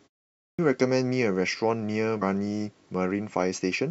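At 0.33 s, after a pause of about a third of a second, the speech returns with a clipped start after a pause. The output device had gone idle in the silence. It needed time to wake and lock again, so about 257 ms of sound is swallowed. The first sounds come in abruptly, already under way.

At 2.21 s there is damaged data in a compressed stream. Part of the encoded data was corrupt. The decoder misread the frames there and lost sync, then searched for the next valid header. The result is a brief blip.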